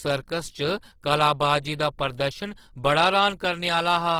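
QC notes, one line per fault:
Throughout: Opus compression. The speech sounds grainy, rough and noisy across the full band, likely from Opus music-mode coding starved of bits, which fits about 16 kbps.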